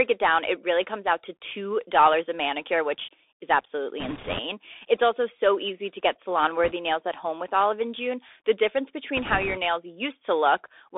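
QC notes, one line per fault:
Throughout: Bluetooth CVSD headset codec. Plainly audible narrowband telephone sound, roughly 300 Hz to 3.6 kHz, with scratchy sibilants and granular hiss. This is from 64 kbps one-bit delta coding whose adaptive step lags fast high-frequency detail.
4.00–4.39 s, 6.64–6.72 s, 9.17–9.58 s: bit errors on a Bluetooth voice link. There are bursts of rushing, crackly noise without sharp clicks, heaviest in the first after "a manicure which is". The second comes after "easy to get salon" and before "nails at home with". Flipped one-bit samples each nudge the waveform by an amount that grows with the speech level, at an error rate of around a few percent.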